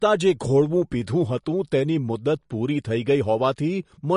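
Speech, with MP3 compression damage throughout. Nothing is heard above 10.6 kHz, and the sound is watery. This likely points to a low bitrate around 40 kbps.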